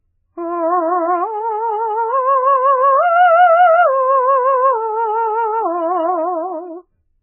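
MP3 compression damage runs throughout the music, with nothing above 3 kHz and a watery, swirling texture. The likely cause is an MP3 encoder starved of bits, consistent with roughly 8 kbps, cutting the treble outright and dropping weak frequency lines that flicker between frames.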